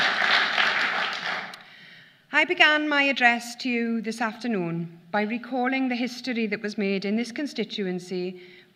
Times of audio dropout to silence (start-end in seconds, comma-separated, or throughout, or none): none